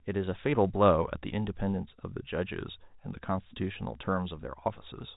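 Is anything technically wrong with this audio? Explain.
No, nothing in this speech recording stands out as a technical fault. The sound carries the narrow band of G.711 telephone coding, with nothing above about 3.8 kHz, which is the normal character of that format.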